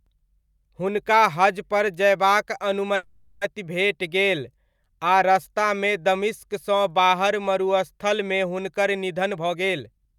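Speech with two faults. Just after "हुनका हजपर जयबाक", from 2.95 to 3.43 s, there is a call audio freeze. The last sound is stretched into a fading buzz or hiss for about 460 ms, and then the speech resumes exactly where it stopped. Because nothing is lost, this is a pause inserted into the audio rather than a dropout. Delayed packets likely emptied the jitter buffer. After "दमिश्कसँ बाहर मरुस्थलमे हुनकर", from 9.21 to 10.14 s, a jitter buffer speed-up runs the speech at 131% with its pitch unchanged, which separates it from a pitch shift. Roughly 300 ms of short pitch-period slices were trimmed to reduce the built-up delay.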